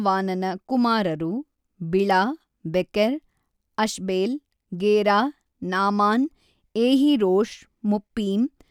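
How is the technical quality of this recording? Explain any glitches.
The recording has no audible technical glitches, and the speech signal comes through intact and continuous without any disruptions.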